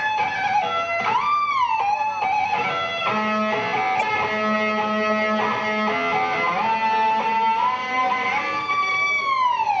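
Damaged data in the compressed stream at 3.99 to 4.03 s throws the decoder out of sync, heard as a brief glitch.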